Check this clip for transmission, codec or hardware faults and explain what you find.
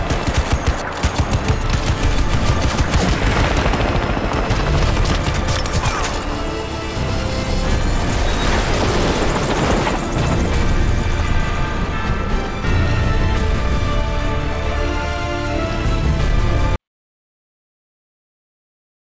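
One fault, an audio dropout to silence. From 16.76 s to the end, the sound cuts off into silence with no room tone. The input was likely lost while zeros kept being written. The call path has a band limit, with nothing above 8 kHz, which fits G.722.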